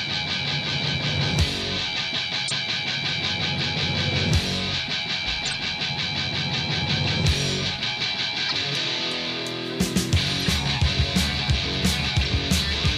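Corrupt frame decoded: damaged compressed frames were played anyway, putting energy at the wrong frequencies. This causes brief blips or noise bursts, peaking at about -10 to -15 dBFS, at 1.22–1.25, 2.45–2.52, 5.46–5.56, 8.49–8.54, 10.41–10.47 and 12.24–12.27 s.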